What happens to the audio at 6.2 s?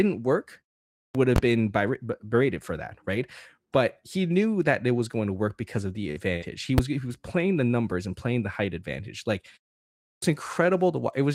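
A burst of packet loss runs from about 6.11 to 6.18 s, just after "work because of the". Packets in a row failed to arrive in time, so the receiver stretched the last sound it had for about 46 ms, holding and fading it, then picked up further along. Roughly 40 ms of the original signal never plays, so the passage sounds clipped and jumpy rather than silent.

The lost packet was rebuilt from error correction for the last 20 ms of that span, 6.16 to 6.18 s. A low-bitrate backup copy carried inside the following packet let the decoder fill that slot instead of leaving it empty. Because the copy is coarser than the original, those 20 ms come through rougher and noisier than the surrounding audio, a brief grainy patch just before the signal returns to normal.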